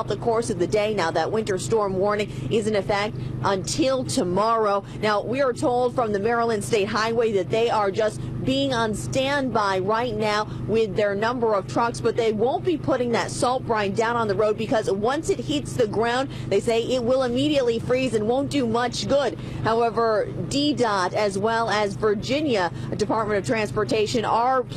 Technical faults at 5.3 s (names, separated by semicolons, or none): none